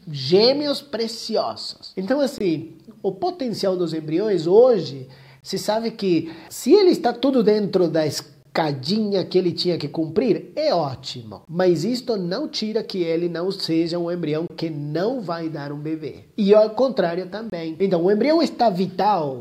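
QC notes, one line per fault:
2.38, 5.41, 8.43, 11.45, 14.48, 17.50 s: gap between chunks, 23 ms hard-edged silences every 3 s.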